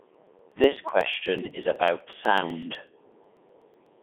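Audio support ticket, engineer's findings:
Codec 2 vocoder, throughout. Speech robotic and buzzy, heavily damaged, band limited to roughly 250 Hz to 3.5 kHz, nothing above 3.7 kHz. Mechanism: Codec 2 at 3.2 kbit/s sends only pitch, voicing, energy and spectral envelope; decoder rebuilds the voice from summed sines, so the original waveform and fine detail are gone. Probable component: digital-radio link or gateway in the chain.

Periodic USB or driver dropouts, 0.15 s to 3.86 s. Regular ticks every 0.124 s, around thirty in all, each about a millisecond long, heard only while there is signal. Mechanism: a background task stalls the USB bus or audio driver on a fixed schedule, and samples are skipped rather than padded with silence, so the waveform jumps and clicks. Probable component: capture interface driver or host USB scheduling.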